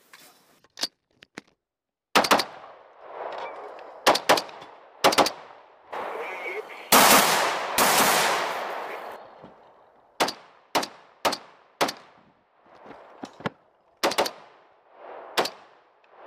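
At 7.2 s the audio suddenly drops by about 4 dB and stays lower to the end. This sudden gain jump likely comes from an unramped digital gain change.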